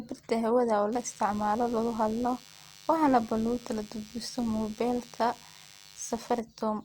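From 0.93 to 6.4 s, a DECT cordless phone buzz sits under the speech. Radio bursts every 10 ms get rectified, giving a thin, steady 100 Hz buzz, well below the voice.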